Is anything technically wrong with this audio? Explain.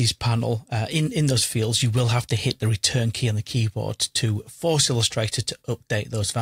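Yes. Throughout the clip, the sound carries faint, unevenly spaced hiccups. This is clock drift between sender and receiver: the sender's clock runs about 3% slow, so the receiver's buffer keeps draining.

From 0.04 to 6.41 s, repeated timing corrections make the audio play at 97% speed. The receiver keeps repeating short pieces to fill the gap, adding roughly 150 ms in total.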